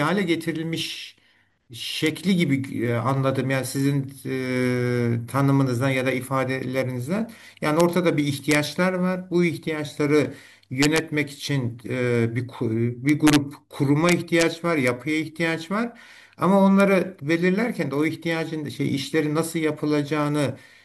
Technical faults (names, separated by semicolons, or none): integer overflow